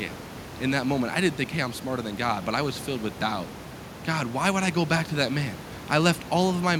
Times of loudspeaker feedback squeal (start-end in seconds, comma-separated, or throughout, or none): none